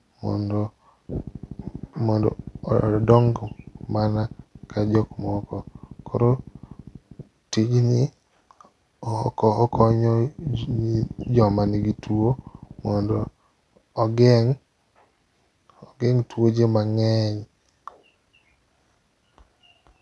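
A recording of speech, with no technical fault to report. Nothing in the signal calls for a time or a cause.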